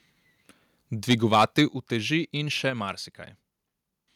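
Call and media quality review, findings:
Microphone overload, 1.1 to 1.62 s, ending just before "uteži in še": harsh, crackly edge on the loudest syllables, peaks flattened at the converter's limit. Likely cause is mic input gain set too high, driving the converter about 5 dB past its limit. Only a small fraction of samples is clipped.

Microphone volume stepped down at 1.68 s, again just before "uteži in še": abrupt drop of about 6 dB in voice and background together, right after the distorted stretch. Likely cause is the call software's automatic input-gain control cutting device volume in one step after detecting clipping.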